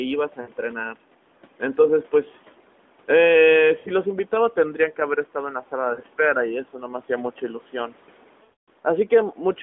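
Lost AMR speech frames occur at 0.42 to 0.51 s, 3.80 to 3.89 s, 5.94 to 6.01 s and 8.44 to 8.69 s. Corrupted frames failed their check, so the decoder repeated its last good pitch and vocal tract settings at falling gain. The first three gaps, 40 to 60 ms, fit two or three 20 ms frames and sound like brief warbly dips. The 240 ms run at 8.44 s stretches the speech out and fades it to silence before recovering roughly.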